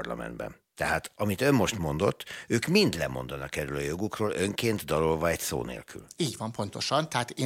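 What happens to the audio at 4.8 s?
At 4.76 s a single sharp tick cuts through the speech, broadband and unrelated to it, peaking at about -27 dBFS. It is a bit error spike: a flipped bit sends two consecutive samples jumping by a power of two before they snap straight back.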